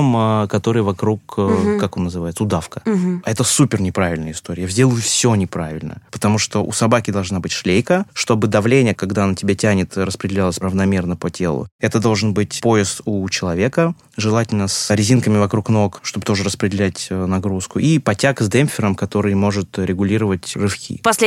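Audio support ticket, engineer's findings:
No audible faults found on review; nothing to escalate.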